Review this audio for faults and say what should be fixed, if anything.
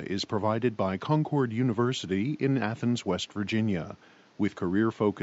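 No faults; nothing to fix.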